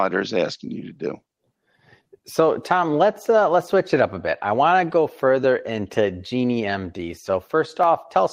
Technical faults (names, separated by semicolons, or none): clock drift between sender and receiver; repeated timing corrections